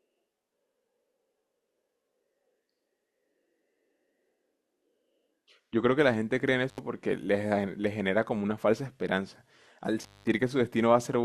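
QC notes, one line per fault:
6.69–6.79 s and 10.02–10.28 s, intermittent contact: a loose cable or plug connection briefly lost contact, opening the signal path for about 79 ms the first time and about 201 ms the second. While the line was open the audio dropped out to faint hiss, and the metal surfaces scraping as they parted and met again put crackle at both edges of each gap. The second dropout is longer.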